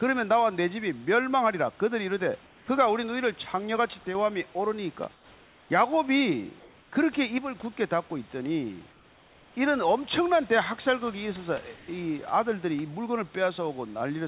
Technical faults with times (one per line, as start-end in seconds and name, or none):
2.46-2.68 comfort noise in place of the background
4.07-4.15 one channel drops out
5.14-5.70 comfort noise in place of the background
6.60-6.92 comfort noise in place of the background
8.92-9.56 comfort noise in place of the background
11.76-11.88 comfort noise in place of the background